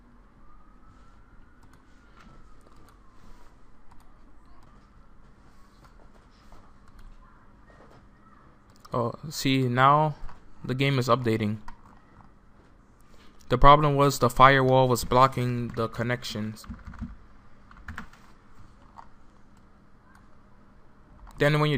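No technical faults are audible.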